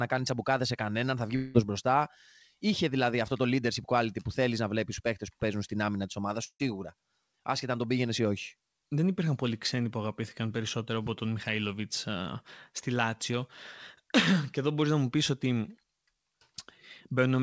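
Long network dropouts, likely, at 1.36 to 1.56 s and 6.44 to 6.62 s: the speech gives way to a buzzy continuation of the last sound that fades out. The first gap is filled this way for about 0.18 s. The second fades after about 0.15 s into roughly 70 ms of silence. Speech then resumes further on with the lost part missing, over a G.722 call path that keeps nothing above 8 kHz.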